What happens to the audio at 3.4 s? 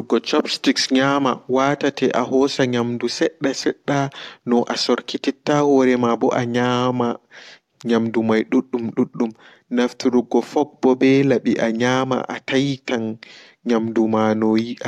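Nothing goes wrong at 3.4 s; the speech carries on intact through that moment, with no dropout, click or distortion to be heard.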